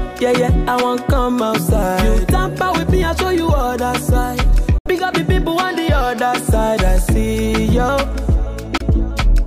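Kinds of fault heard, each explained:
Bluetooth dropout: silent holes of 70 ms and 23 ms, likely lost wireless packets; sound resumes further on, skipping ahead rather than pausing like a buffer stall.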